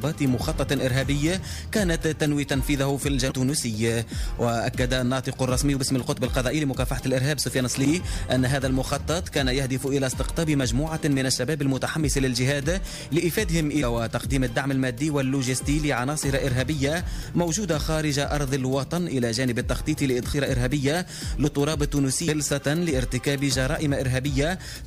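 Damaged data in a compressed stream shows up as five brief blips, at 3.30 to 3.32 s, 7.85 s, 13.82 s, 20.32 s and 22.27 s. At each point corrupted bytes reach the decoder, which misreads the frame and loses sync until it finds the next valid header. The result is a short chirp, squawk, click or hole. A spectrogram shows thin vertical smears of broadband or oddly banded energy, and the waveform shows abrupt discontinuities.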